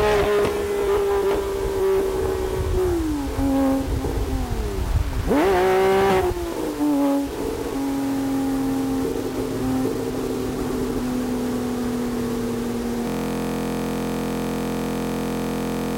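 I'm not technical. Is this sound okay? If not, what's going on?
No. Throughout, a grainy roughness rides along with the sound and vanishes in pauses. That's likely low bit depth without dither, with too few levels to describe quiet detail. From 13.08 s to the end, a system hang loop repeats one 23 ms slice about 43 times a second, making a steady buzz rather than a stutter.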